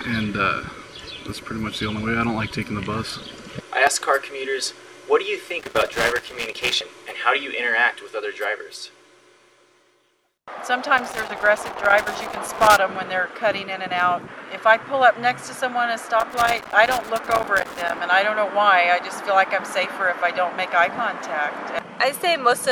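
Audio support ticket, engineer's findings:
Loose connector crackle, three bursts: 5.59–6.75 s, 10.98–12.78 s, 16.20–17.98 s. Irregular crackle and scratching chopping through the audio, roughly 1 to 2 s each. Probable culprit is a worn or dirty plug or jack somewhere in the chain. The contact makes and breaks rapidly as it shifts, so the signal keeps cutting in and out. Worth reseating or cleaning the cables and swapping leads to find the bad one.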